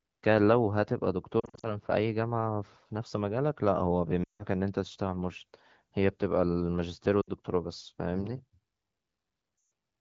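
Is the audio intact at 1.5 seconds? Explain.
No. Lost AMR speech frames affect 1.39 to 1.78 s: about 160 ms of audio is lost, scattered over 240 ms in runs of up to 40 ms. The decoder repeats the last good pitch and vocal-tract settings at falling gain, so the speech warbles and dips in short gaps.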